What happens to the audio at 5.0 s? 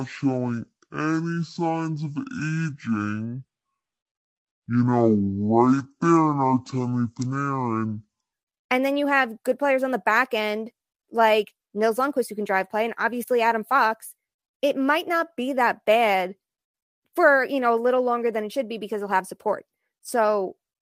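Section at the wrong speed, 0.00 to 8.33 s: the speech plays at half speed, likely from a wrong clock, sounding deep and slow until "and then you".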